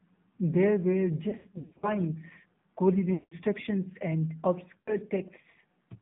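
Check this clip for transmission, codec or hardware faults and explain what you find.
Yes, two faults are present: the speech has passed through a narrowband mobile codec, and three stretches show lost speech frames.

AMR narrowband mobile codec, throughout: The audio is confined to about 150 Hz to 3.6 kHz, and the voice has a buzzy, synthetic edge. The codec models the vocal tract and excites it with sparse pulses, and at a low mode (the damage fits roughly 7.4 kbps) that pulse model is clearly audible. A plain telephone band filter would only dull the sound. This buzz and artificial texture come from the coding itself.

Lost AMR speech frames, 1.30 to 1.96 s, 3.14 to 3.34 s and 4.78 to 4.93 s: The decoder repeated the last good pitch and vocal tract settings with decaying gain in place of the missing frames. In the first stretch the gaps are scattered over about half a second, with runs no longer than 60 ms, so the sound warbles and dips repeatedly. 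The second stretch is about 180 ms of loss, so the voice smears and fades toward silence before returning weak and rough. The third is a brief 80 ms smear. A packet dropout would leave hard silence or clicks. Here the gaps are filled with stretched, fading voice-like sound instead.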